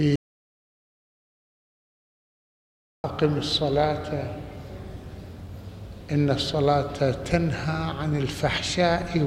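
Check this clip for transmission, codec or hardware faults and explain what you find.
One fault stands out: an audio dropout to silence. Just after 0.16 s the sound cuts off dead and returns at 3.04 s, leaving 2.88 s of silence with no room tone. The input was likely lost while the recorder kept writing zeros, so whatever sounded then is gone.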